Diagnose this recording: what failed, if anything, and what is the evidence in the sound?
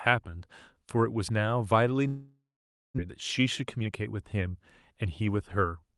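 Long network dropout, 2.07 to 3.00 s, at the network stage. The speech halts and the receiver stretches the final sound into a buzzy tail that fades away, leaving about 0.53 s of silence before the speech returns. When it does, it has jumped ahead, with about 0.6 s of speech never played. This points to a stall in packet delivery, likely a network outage, with concealment filling the 0.91 s gap until it gave up.

Jitter buffer speed-up, 3.08 to 5.76 s, at the buffer stage. After the gap the speech runs at 110% speed with its pitch unchanged, so it sounds hurried. The receiver had a backlog of delayed audio queued. To trim roughly a third of a second of extra delay, it cut out short pitch-period slices again and again. This happened within the Opus call path, which adds its coding noise and a 12 kHz upper limit throughout.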